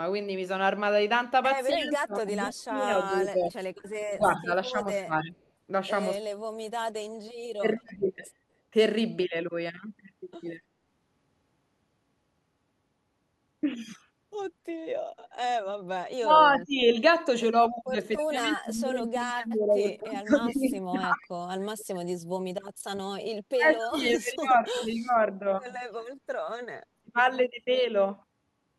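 A speech recording with echo canceller trouble in two stretches. The first fault is speech suppressed in double talk, from 1.72 to 8.09 s and again from 16.18 to 27.18 s. The voice dips and breaks up in pieces. The losses add up to roughly two seconds in the first stretch and roughly five in the second. The deepest drops are around 20 dB and 25 dB. The likely cause is both sides talking at once. The canceller then cannot tell the local talker from loudspeaker echo, so it turns everything down. The second fault is background gated by the echo canceller. The room sound drops briefly at 3.82 to 3.86 s, by about 9 dB for 40 ms. It drops again at 26.39 to 26.50 s, by about 24 dB for 100 ms. Each time the canceller clamps the microphone while the loudspeaker plays, then lets go. The third fault is echo leak. A faint delayed copy of the voice trails 264 ms behind it. It appears as a brief scrap at 7.85 to 7.95 s, about 30 dB below the speech. 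It returns for a longer stretch from 18.18 to 21.28 s, at about 25 dB down. It is likely loudspeaker sound that the loudspeaker side's canceller failed to remove and sent back.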